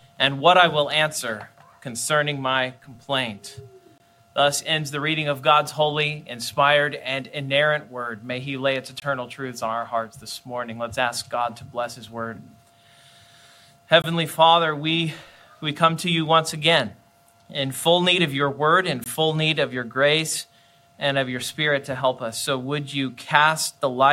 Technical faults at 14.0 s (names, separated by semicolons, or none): gap between chunks